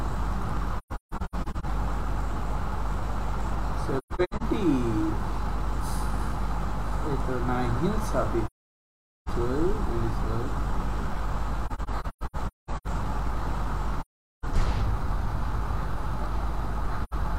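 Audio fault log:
0.78–1.65 s, 3.98–4.43 s, 8.46–9.29 s, 11.66–12.88 s, 14.01–14.45 s, 17.04–17.14 s: AAC frame loss with muting. The decoder zeroed the missing frames, so the overlapping windows fade the sound out and back in, leaving soft-edged holes. Those at 0.78 s, 3.98 s, 11.66 s and 17.04 s are broken into scattered dropouts, the longest lasting about 100 to 200 ms.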